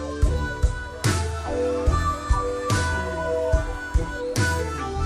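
The audio has loudspeaker feedback squeal from 2.77 to 3.75 s. A single 643 Hz tone swells over about half a second and ends up roughly 5 dB above the rest of the sound. A microphone picked up its own loudspeaker, and the loop gain passed one at that frequency.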